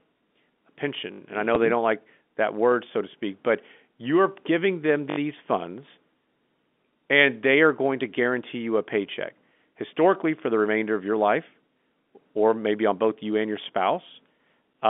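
At 1.12 to 1.2 s, fresh audio failed to reach the output in time, so the device replayed its last buffer four extra times. A piece of about 20 ms repeats with a hard join at each pass, giving a short stutter with essentially nothing missing. At 1.55 s, a packet loss with last packet repeated replaced one lost 10 ms packet with a copy of the previous one, heard as a small blip. The same repeated buffer fault recurs at 5.1 to 5.18 s, right after "but you're giving them", with the same four-fold 20 ms stutter.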